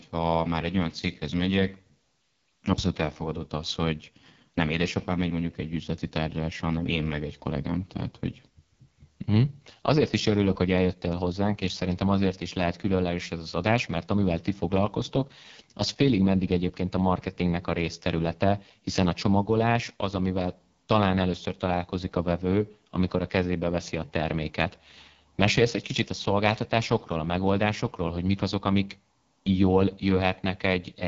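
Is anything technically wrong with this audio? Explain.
Yes. Throughout, the speech carries heavy AMR wideband (HD Voice) codec damage: rough, raspy voicing from a coarse pulse-driven vocal-tract model, fitting its lowest 6.6 kbit/s mode. Unlike narrowband telephone coding, the bandwidth extends to 7.4 kHz, with hissy synthetic noise at the top.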